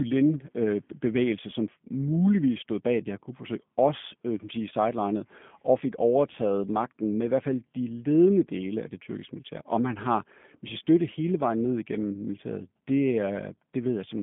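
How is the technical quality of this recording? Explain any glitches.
The speech is intelligible but plainly degraded throughout by G.729 codec coding. From start to finish, the audio is band-limited to roughly 150 Hz to 3.5 kHz with nothing above 3.6 kHz. The rough, slightly synthetic texture fits an 8 kbit/s G.729A stream, which rebuilds each short frame from a vocal tract filter, a pitch predictor and a few pulses rather than the original waveform.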